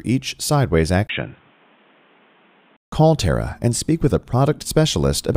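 The input most likely switched to a poorer device at 1.07 s and back at 2.79 s. Between those points the sound is cut off above 3.8 kHz and turns dull and boxy, with a new background noise about 35 dB under the signal. A brief gap of about 20 ms marks the switch, and the overall level stays much the same. At 2.79 s the full, clearer band returns just as abruptly.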